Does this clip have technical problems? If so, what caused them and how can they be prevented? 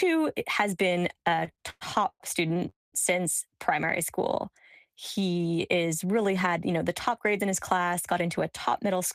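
Yes. From 1.19 to 2.63 s, right after "has been", the speech drags and stutters through sixteen short stalls of up to 111 ms, with held-over sound filling about 29% of that stretch. These are repeated stalls (stutter): packets kept arriving late or too slowly, so the jitter buffer kept running dry and the receiver stretched the last sound each time. A larger adaptive jitter buffer and a steadier, prioritised network path would prevent this.

From 2.69 to 2.94 s, just before "since primary", the audio freezes. A brief fading buzz or hiss gives way to about 190 ms of silence, and speech then resumes where it stopped, having lost nothing but arriving 231 ms later. This call audio freeze was likely caused by packets held up in transit, which emptied the jitter buffer until they arrived. Reducing network congestion and applying QoS marking to voice traffic would prevent it.

From 6.21 to 8.29 s the speech sounds hurried, running at about 107% speed with its pitch unchanged. 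This is a jitter buffer speed-up: holding more audio than it aimed for, the receiver trimmed short pitch-period slices many times in a row, around 150 ms in total, to shrink its backlog. A steadier network, or a gentler catch-up setting in the buffer, would prevent it.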